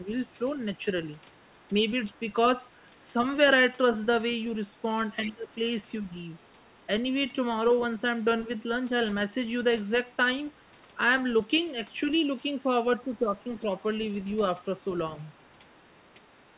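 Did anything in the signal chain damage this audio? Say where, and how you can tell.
Yes, at the call-processing stage: other side's voice leaking through appears at 0.08–3.08, 4.35–6.87, 10.55–10.97, 11.92–12.97, 13.55–14.64 and 15.25–16.58 s. It is faint, roughly 20 to 40 dB under the speech. A separate second voice, rather than a delayed copy of the talker, points to echo cancellation that likely left residual loudspeaker pickup.

Speech suppressed in double talk also occurs, at 5.25–6.05 s (dips of about 20 dB) and 13.02–13.69 s (about 10 dB). Both overlap leaked far-end speech. The talker's own level drops only while both sides talk, unlike a network dropout, which is likely the echo canceller attenuating everything it cannot separate. The band stopping at 4 kHz fits a G.711 call path.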